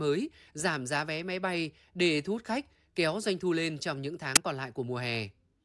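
At 4.36 s, right after "thu lên trong những", a short burst of static cuts into the speech. It is file tags played as audio. Part of the file's metadata, here an embedded cover picture, was fed to the decoder as if it were sound. Compressed image data looks random, so it plays as very loud white noise. The burst starts and stops with hard edges. It lasts only about 11 ms, so it sounds like a sharp crackle.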